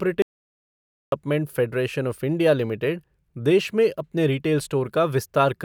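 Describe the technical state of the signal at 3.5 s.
At 3.5 s the speech signal is intact, with no audible technical fault at that moment.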